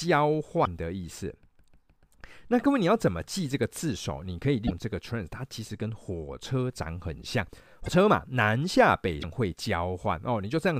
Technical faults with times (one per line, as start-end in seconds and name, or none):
0.64-0.67 broken MP3 bit reservoir
4.66-4.71 broken MP3 bit reservoir
7.85-7.88 broken MP3 bit reservoir
9.21-9.24 broken MP3 bit reservoir